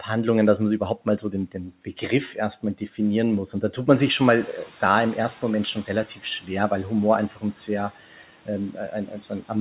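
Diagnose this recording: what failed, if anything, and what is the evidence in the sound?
Speech cut by the noise suppressor, a call-processing fault: parts of the speech sink about 8 to 11 dB at 1.52–1.98 s after "überhaupt mal so den", and at 2.63–2.99, 6.05–6.24, 7.29–7.69 and 8.72–9.5 s. They fade rather than drop to silence, which rules out packet loss.

Noise suppressor catching up: after "da tut man" the room noise jumps about 12 dB near 4.0 s and passes through under-reduced. It then eases down about 8 dB over 2.1 s, to 6.08 s, a gradual adaptation unlike a gate's abrupt switching.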